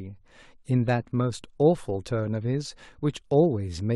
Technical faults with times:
none

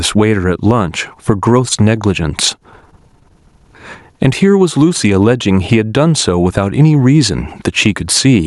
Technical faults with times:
0.00-8.46 gain pumping

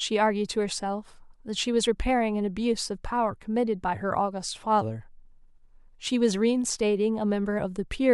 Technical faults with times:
none

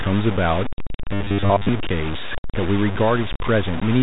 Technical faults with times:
0.00-4.03 low bit depth without dither
1.14-1.69 robotic sound from repeated short buffers

